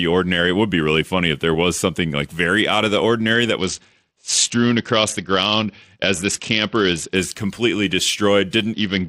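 From 3.58 to 7.16 s and again from 8.73 s to the end, a Bluetooth SBC bit pool drop dulls the treble and adds gritty noise, consistent with the bit pool falling to around 8, roughly 66 kbps.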